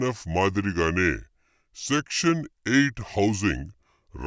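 From the start to the end of the speech, the whole clip carries a wrong sample rate fault. The samples appear to have been captured at 22 kHz but played back at 16 kHz with no rate conversion, so everything runs at about 0.73 times its proper speed. Pitch falls by the same ratio, roughly 5.5 semitones, leaving the voice low, dragged and thick-sounding, with pacing and pitch slowed together rather than separately.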